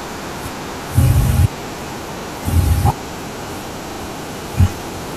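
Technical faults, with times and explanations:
1.79 s and 4.51 s, dropped buffer (overrun): the sound jumps forward with no gap, losing a few milliseconds the first time and around 10 ms the second. It's likely the software didn't read its samples before the hardware overwrote them, so the edges butt together.
2.2–2.24 s and 3.92–4.0 s, repeated buffer: short stutters where a 40 ms slice plays again, once extra at the first spot and twice at the second. Fresh audio didn't arrive in time, so the device replayed its last chunk, costing roughly 40 and 70 ms of sound.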